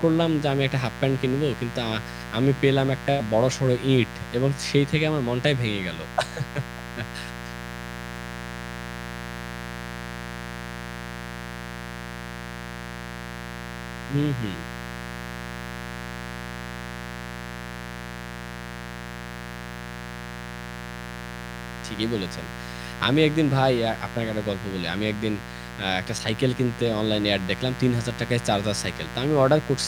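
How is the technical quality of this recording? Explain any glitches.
The technical quality is compromised by mains buzz running from start to finish under the speech. Interference from the 60 Hz power supply, most plausibly sharp switching spikes from a dimmer or rectifier, or a poorly shielded cable, has leaked into the signal path, repeating twice per mains cycle and spraying harmonics of 60 Hz up to several kHz. The result is a steady, raspy buzz sitting loud in the mix, roughly 10 dB below the speech.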